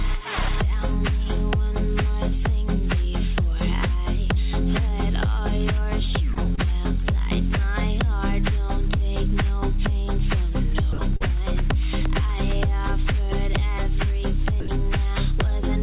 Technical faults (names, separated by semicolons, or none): short concealed packet loss; sound dropped by the voice detector